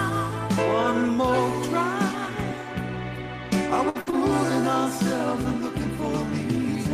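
At 3.89 s a burst of packet loss begins. The receiver fills about 54 ms by extending the last sound and fading it, so it comes out as a held buzz or a dying hiss, and 40 ms of audio is skipped before playback resumes. A second burst at 4.01 s fills about 55 ms and drops 60 ms.

Each burst ends in a lost packet rebuilt from error correction, at 3.95 to 3.97 s and again at 4.06 to 4.08 s. The next packet's low-bitrate copy is decoded for 20 ms each time, so there is no further gap, but those frames sound rougher and noisier.

At 4.10 s a short concealed packet loss replaces 20 ms, continuing the previous sound from its pitch or as shaped noise and then blending back, which gives a brief smear or wobble. The following lost packet, from 4.12 to 4.14 s, is again rebuilt from error correction, adding another 20 ms of rougher, noisier sound.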